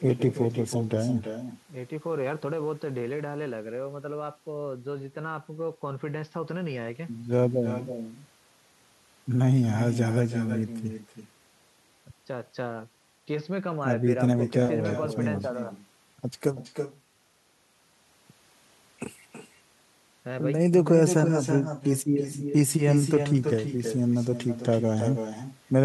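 From start to finish, the speech is trailed by an echo with no canceller: the far end's loudspeaker feeds its microphone, returning a thinner copy about 9 dB down, roughly a third of a second late. Unlike room reverberation, it arrives as a distinct repeat, not a smooth tail.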